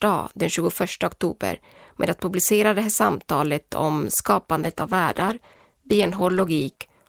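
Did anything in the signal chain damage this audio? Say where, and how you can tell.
Yes, a call bitrate drop at the codec stage, driven by the call's network adaptation. Just after "det här samtalet om", from 4.65 s to 6.89 s, the speech turns rough and muffled, worst for about 2.2 s, which fits the encoder being pushed from roughly 32 down to 14 kbps. With fewer bits, Opus quantises more coarsely and discards the upper band. On a spectrogram, the high-frequency energy vanishes above a lowered ceiling for that stretch.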